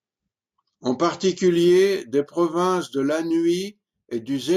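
A speech recording that, from 1.48 s to the end, takes on a faint metallic shimmer, clearest on sibilants, while the true top of the band sounds dulled. This is imaging from linear upsampling. The rate was raised by joining samples with straight lines, a weak interpolation filter that fails to remove mirror copies of the spectrum. A first image band lies between 8 kHz and 16 kHz, about 30 dB below the signal, which fits audio raised from 16 kHz to 48 kHz.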